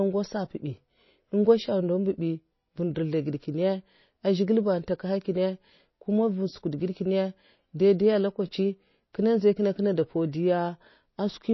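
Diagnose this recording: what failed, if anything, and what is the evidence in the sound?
Codec stage: nothing above 5.8 kHz throughout, with plainly audible watery swirl, likely MP3 compression starving bits and cutting treble, which fits roughly 24 kbps.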